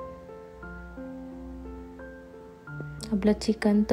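A sudden voltage step, likely from a plug, switch, static discharge or driver glitch, enters the signal path at 2.81 to 2.83 s. It produces a single loud pop, a few decibels above the surrounding sound, which carries on unbroken beneath it.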